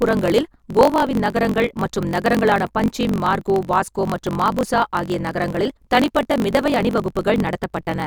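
Speech runs about 1.12 times fast at near-normal pitch with a 46.9 Hz buzz throughout, a block size mismatch (truncated) fitting 1024-sample reads discarding each block's tail.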